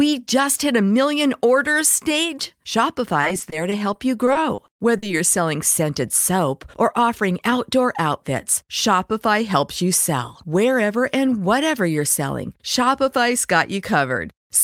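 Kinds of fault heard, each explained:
Repeated packet loss (robotic sound): from about 3.2 to 5.1 s, just before "you're selling scented soap", the speech keeps breaking into around a dozen short holes, none longer than about 40 ms. Each hole is papered over by stretching the last bit of sound, about 230 ms patched in total, so the speech turns choppy rather than silent. That rapid, recurring pattern separates it from a single isolated dropout or a one-off click.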